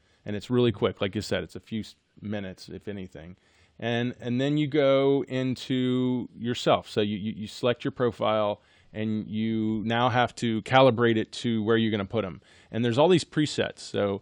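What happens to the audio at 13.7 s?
Nothing goes wrong at 13.7 s; the audio there is intact.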